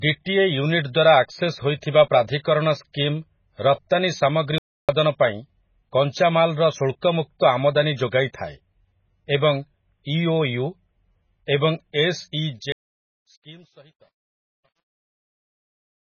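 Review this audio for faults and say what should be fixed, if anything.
A codec starved of bits likely caused the MP3 compression damage heard throughout, and the sound fits a very low bitrate of around 16 kbps. With so few bits, the encoder discards weak frequency lines, which flicker on and off from frame to frame. The damage is heavy: the speech sounds watery and swirly, s sounds pick up metallic chirps, and attacks smear. Encoding at a much higher bitrate, or keeping the original uncompressed, would prevent this.

There are two playback stalls, from 4.58 to 4.89 s (about 0.30 s, just before "ପାଇଁ କଞ୍ଚାମାଲର") and from 12.72 to 13.17 s (about 0.44 s). The player likely ran out of buffered data or had its audio thread blocked, so output went silent until it recovered. The speech cuts off mid-flow for a clearly noticeable gap each time. A larger playback buffer and a real-time audio thread that nothing can block would prevent these.

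The transform codec spread its quantisation noise across an entire block, and a sharp attack fell late in that block, so noise meant for the loud part also filled the quiet moment ahead of it. This pre-echo is heard at 7.39 s, just before "ଆମଦାନୀ ଯୋଗାଇଥାଏ", as a short hiss of about 17 ms before the onset, which then sounds softened and smeared. An encoder that switches to short blocks on transients would prevent it.

The fade-out, from 12.35 s to the end, passed through a gain stage that kept only about 10 bits and added no dither. As the level drops toward the smallest step, the waveform collapses into coarse square steps. This truncation distortion on the fade makes the quiet tail sound gritty, worst from 13.16 s to the end. Applying fades at higher internal precision and dithering before reducing bit depth would prevent this.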